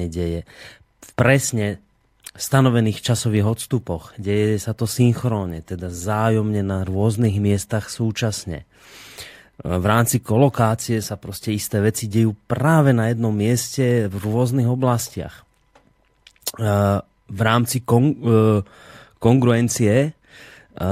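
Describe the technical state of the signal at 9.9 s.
At 9.9 s the speech signal is intact, with no audible fault at that moment.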